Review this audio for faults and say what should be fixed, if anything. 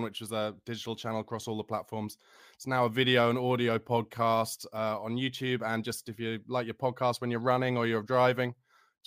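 Nothing stood out on listening to this speech recording, so there is nothing here that needs fixing.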